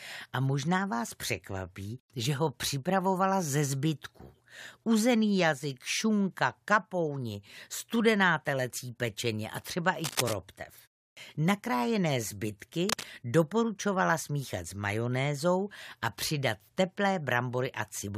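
From 10.04 to 10.34 s, a dense, uneven scratching and rustling rides over the speech, only a little quieter than it. This is cable scratch noise, likely from a worn cable, connector or control being moved so its contact resistance jumps about rapidly. The same scratching returns more briefly from 12.89 to 13.04 s. Between those, at 11.12 to 11.17 s, speech resumes abruptly after a 0.33 s pause with about 48 ms of its onset missing. This is a clipped start after a pause: the output device had dropped into sleep during the short silence and needed that time to wake before sound could pass.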